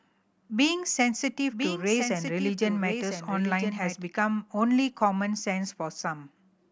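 From 1.51 s to 4.03 s the speech carries a doubled audio track: a second copy, about 5 dB quieter, trails roughly a second behind, likely from a slower capture path. It starts and stops abruptly with no reverberant tail, appearing on a spectrogram as full-band repeated patterns offset in time.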